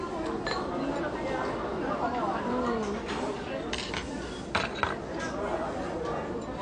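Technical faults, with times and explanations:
Throughout, AAC compression: nothing reaches above 9.8 kHz, leaving the sound dull and smeared with plainly audible codec damage, which fits AAC-LC at about 32 kbps, likely the cause. A spectrogram shows a flat, hard ceiling at 9.8 kHz.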